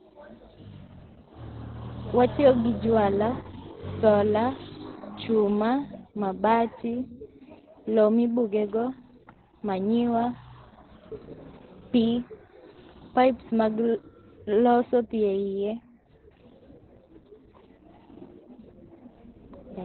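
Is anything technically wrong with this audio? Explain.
Yes. Opus voice compression affects the whole clip. The speech has nothing above 4.2 kHz, so it sounds muffled and narrowband. The coder models speech by prediction and codes the excitation coarsely. That leaves a hoarse, slightly robotic texture, which fits about 8 kbps.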